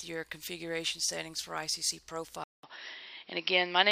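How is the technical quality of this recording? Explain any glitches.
The recording has one clear glitch. At 2.44 s the sound cuts out for about 0.2 s, then returns duller and boxier, with nothing above 5.6 kHz, a level shift of about 5 dB, and a new noise floor roughly 40 dB down. The likely cause is the input switched to a poorer device, whose narrower band and own noise persist to the end.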